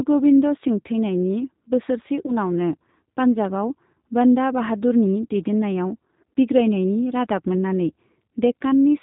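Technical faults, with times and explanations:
Throughout: G.729 codec. Nothing above 4 kHz survives, and the speech sounds rough and synthetic. This fits an 8 kbit/s model-based coder rebuilding each frame from a filter and a few pulses.
2.26 to 2.37 s: VoIP packet loss concealed by the speech codec. Just after "गोविंद सिंह थैनायनि बोसोरसे", about 20 ms of sound is lost, which fits a single dropped packet. The decoder stretches its last pitch and filter into a fading buzzy tone or coloured noise, and the speech stays weak until about 2.37 s.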